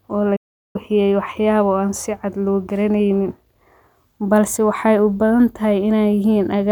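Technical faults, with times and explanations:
0.36 to 0.76 s, digital broadcast dropout: the speech fades out over about 8 ms and goes completely silent for roughly 0.38 s before picking up again mid-stream. That's the receiver muting because it stopped getting frames it could trust, either from lost signal or failed checksums. The gap fits about a dozen frames going missing. Whatever was sent during that window is gone, so the speech resumes later in the programme rather than where it stopped.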